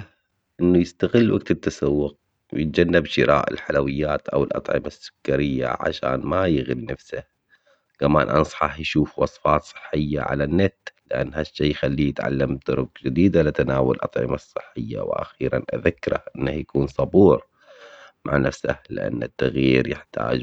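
Nothing goes wrong anywhere in this bit of speech, so there's no fault to point to at any moment.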